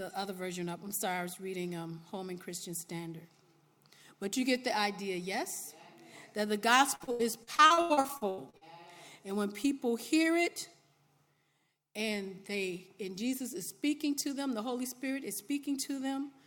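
From 6.95 to 8.69 s the audio turns choppy and robotic, the sign of repeated packet loss. Well over a dozen lost or late packets leave holes up to 84 ms long, and each is papered over by stretching the last good sound, so about 38% of the stretch is filler. On a spectrogram this shows as a run of smeared, flat horizontal bands broken by abrupt vertical edges. The waveform shows short repeated cycles between jagged splices.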